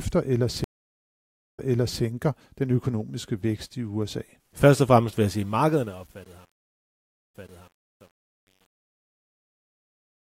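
This speech clip has two stream reconnects. At 0.64 s the sound cuts to about 0.91 s of silence, then resumes at 2.02 s on "den økonomiske vækst i". At 6.65 s a second gap of about 0.68 s ends at 7.88 s. Each time the player picked up 0.47 s and 0.55 s earlier than where it broke off, so a short stretch is heard twice. That repetition, plus a fresh decoder easing in over its first frame or two, separates a reconnect from a plain dropout, which would skip material rather than replay it. From 5.21 s, after "og fremmest vil", the fade-out that runs toward the end suffers truncation distortion. The fade stage keeps only about 9 bits with no dither. As the level sinks toward the smallest step, the waveform collapses into coarse square steps, and from 5.68 s to the end it turns gritty. Unlike steady hiss or codec smearing, this grit grows worse the quieter the fade gets.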